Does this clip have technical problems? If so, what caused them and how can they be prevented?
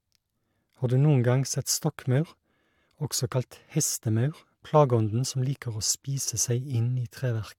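No, the signal shows no technical faults, so there is nothing here that needs preventing.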